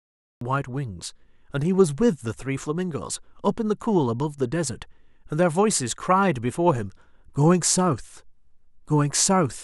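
The clip opens on digital silence. From 0 to 0.41 s there is nothing at all, not even a noise floor. At 0.41 s the speech arrives abruptly, already in the middle of a sound. This is a cut-off start. Capture or streaming began late, so the opening of the utterance was never recorded. There is no natural attack and no fade-in. The sound jumps from dead silence straight to full level.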